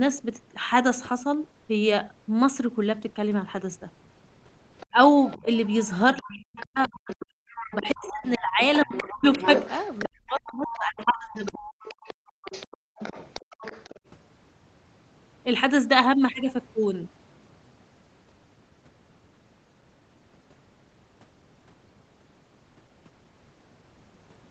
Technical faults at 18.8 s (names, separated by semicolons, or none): none